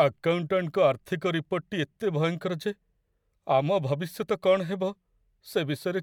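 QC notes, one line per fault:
No audible faults found in this speech recording.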